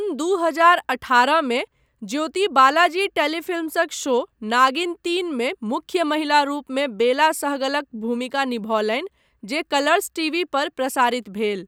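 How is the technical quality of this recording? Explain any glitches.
The technical quality of the recording is sound, with no glitches to explain.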